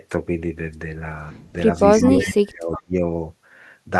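From 2.03 to 2.94 s the speech dips and breaks up, with the deepest drop about 25 dB. This is speech suppressed in double talk. The echo canceller likely mistook overlapping talk for echo and turned everything down for nearly a second.

Inside that stretch, at 2.2 to 2.32 s and 2.74 to 2.82 s, short delayed scraps of the voice return about 368 ms late. They sit about 15 dB and 20 dB below the speech. This is echo leak, likely from loudspeaker pickup the canceller failed to remove.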